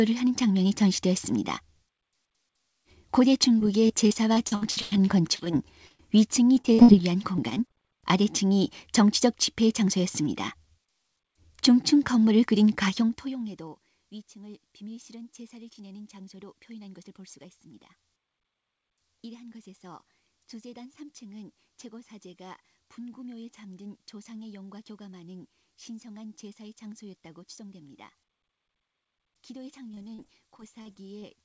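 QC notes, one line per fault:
3.59–6.00 s: repeated packet loss (robotic sound). Many short holes, the longest about 0.1 s, are filled by repeating the last sound. About a fifth of the span is patched, so it turns choppy.
6.56–6.89 s: repeated packet loss. A brief burst. Nearly half is patched, with gaps up to 58 ms.
7.36–7.76 s: repeated packet loss. Tiny gaps, none over 14 ms, make it choppy.
29.92–31.24 s: repeated packet loss. Gaps up to 40 ms break up the ending.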